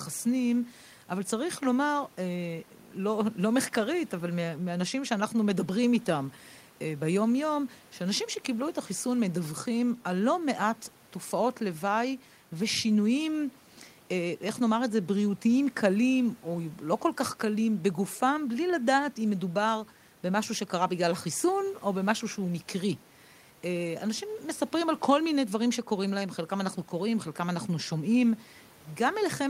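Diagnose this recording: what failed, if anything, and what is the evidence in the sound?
Nothing stood out on listening to this speech recording; the only thing beneath it is the ordinary noise of the room, sitting about 31 dB below the speech.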